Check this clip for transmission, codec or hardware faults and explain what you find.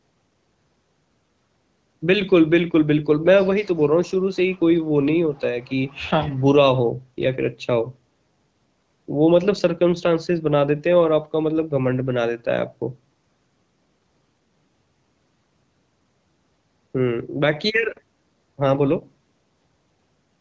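No transmission, codec or hardware faults turn up anywhere in the speech. What can be heard is the normal band-limiting of a call path, with nothing above 8 kHz and the light texture of AMR wideband (HD Voice) coding, which fits its 12.65 kbit/s mode, where speech stays clear.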